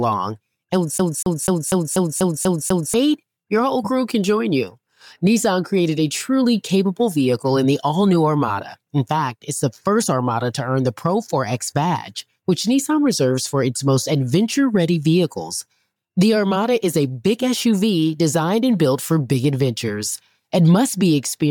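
From 0.98 s to 2.94 s the audio shows a CD stuck on one turn. A scratch keeps throwing the laser back one track, so the same 0.24 s segment repeats eight times, each jump marked by a brief mute, giving a fast, even skipping stutter.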